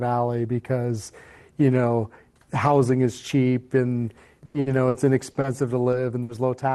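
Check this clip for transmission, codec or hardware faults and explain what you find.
Two transmission faults show up, both from packets not arriving in time on what sounds like an Opus call path, whose content stops near 12 kHz, which fits a bitrate of about 20 kbps.

Repeated packet loss (robotic sound) runs from 4.45 to 5.47 s. Five separate gaps open in this stretch, the longest 90 ms. Each time, the receiver stretches the last good sound forward, for 280 ms of filled-in audio in total. That is 28% of the span. A further 120 ms simply never plays. The result is choppy sound with pieces missing. A spectrogram shows repeated smeared or frozen bands with abrupt edges, and the waveform shows abrupt joins and steady, uniform patches.

A burst of packet loss hits from 6.23 to 6.46 s. Several consecutive packets go missing. The receiver holds the last sound for 60 ms while fading it down, so it comes out as a held buzz or a dying hiss. 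Then the audio jumps ahead, skipping about 60 ms. On a spectrogram this appears as a flat, sustained smear that dims before a sudden restart. The waveform shows a decaying stretch followed by a hard discontinuity.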